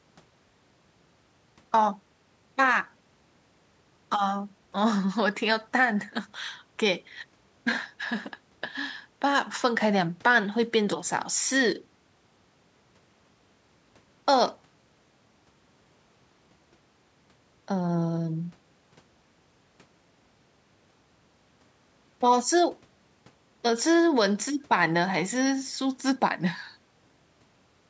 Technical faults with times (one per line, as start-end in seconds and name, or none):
none